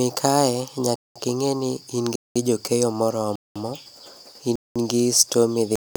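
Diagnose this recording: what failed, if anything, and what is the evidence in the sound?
Gap between chunks at 0.96, 2.16, 3.36, 4.56 and 5.76 s: codec padding or late-starting playback likely leaves 200 ms silences after each 1 s speech chunk, interrupting but not losing sound.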